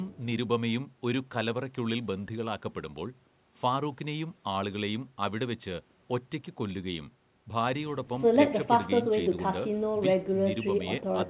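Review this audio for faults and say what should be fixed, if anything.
Nothing stood out on listening to this speech, so there is nothing that needs fixing.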